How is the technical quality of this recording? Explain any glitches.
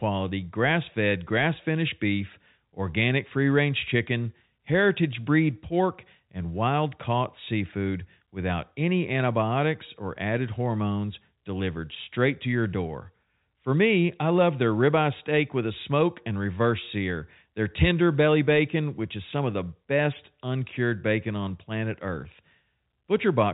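Nothing stood out on listening to this telephone-band speech recording, which has no audible glitches to explain.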